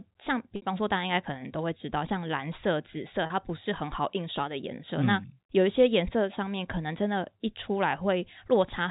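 At 0.56 s for 60 ms, and at 3.26 s for 40 ms, the speech freezes into a held, buzzy tone. This is packet loss with pitch repetition: the receiver loops the last pitch period over the missing packets. Unlike a plain dropout, the gap is filled rather than silent.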